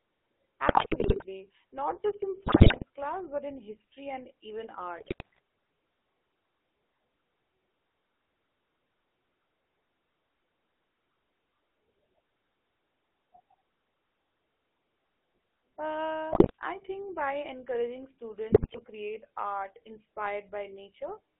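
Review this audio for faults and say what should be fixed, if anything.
Throughout the clip, a GSM full-rate codec reduces the speech to a pulse-driven vocal-tract model in a 300 Hz to 3.4 kHz band, giving a buzzy, gravelly roughness that fits a 13 kbps link. Prevent it by carrying the call over a wideband or modern codec instead of legacy GSM full rate.

GSM bit errors corrupt the decoder's filter, pitch and gain values, producing squawks, pops and gargling at 0.66–1.48 s, 2.42–2.84 s (after "just in", before "class but in history"), 4.98–5.39 s (after "in history and even"), 16.32–16.51 s (before "I think by encouraging") and 18.50–18.81 s. Prevent them with a stronger radio link, better channel coding, or muting corrupted frames instead of decoding them.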